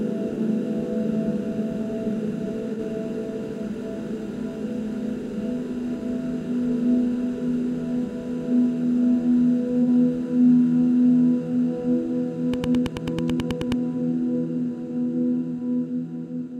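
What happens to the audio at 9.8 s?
Around 9.82 to 9.88 s there's a brief AAC frame loss with concealment. About 43 ms of coded audio went missing, which fits a single dropped AAC frame. Rather than leave a hole, the decoder rebuilt that stretch from the last spectrum it decoded cleanly, roughly reusing the energy with scrambled phase. It's too short to fade toward silence, so you get a quick smeared, noisy, phasey blip in the sound before normal decoding picks back up.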